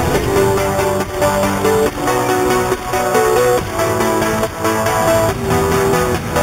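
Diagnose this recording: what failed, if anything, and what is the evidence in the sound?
The failure is at the sample-rate conversion stage: imaging from sample-and-hold upsampling throughout. A metallic fizz sits about 15 dB below the sound, filling 4 to 8 kHz and tracking its level. This fits 8 kHz audio raised to 48 kHz by repeating samples unfiltered, which mirrors the spectrum. Unlike hiss, this band moves opposite to the pitch.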